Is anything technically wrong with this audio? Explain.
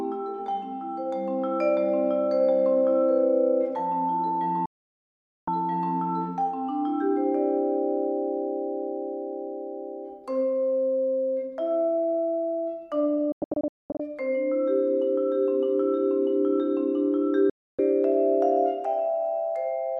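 Yes, there are three digital broadcast dropouts, at 4.66 to 5.48 s, 13.32 to 14.0 s (several short holes, the longest about 216 ms) and 17.5 to 17.79 s. The receiver mutes over about 3 ms when frames fail, leaving clean silence rather than the chirps or smears of concealed packet loss, and it resumes later in the programme.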